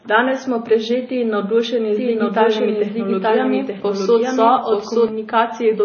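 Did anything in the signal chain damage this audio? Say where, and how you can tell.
Yes. The speech sounds watery and swirly throughout, with smeared consonant attacks and nothing above 6.6 kHz. This points to the codec stage, likely MP3 compression at a low bitrate near 24 kbps, where the encoder cuts the treble and weak bands flicker between frames.

From 1.96 s to 5.08 s, a second full-band copy of the speech runs about a second behind, at roughly equal loudness. It starts and stops abruptly, with no decay or room colour. This doubled audio track likely comes from an edit or second capture path holding two offset copies.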